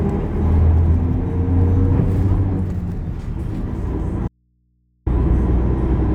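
At 4.28 s the sound cuts out abruptly and returns at 5.06 s, an audio dropout to a faint residue lasting about 0.78 s. The gap holds only mains hum, far below the normal level, roughly 45 dB down. The likely cause is a brief loss of the incoming signal while everything downstream stayed live and kept picking up hum from the open input. A digital mute would leave true silence, and a fade or natural pause would taper rather than snap off and back.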